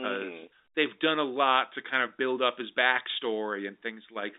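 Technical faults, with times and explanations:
Nothing stood out on listening to this speech.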